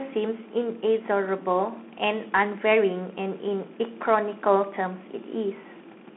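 From start to finish the speech passes through a Bluetooth CVSD headset codec. Everything above 3.8 kHz is gone, leaving a band of roughly 200 Hz to 3.5 kHz. Unlike plain telephone band-limiting, the one-bit delta coding adds a granular hiss, and its adapting step overloads on sharp, loud sounds, so s sounds turn scratchy.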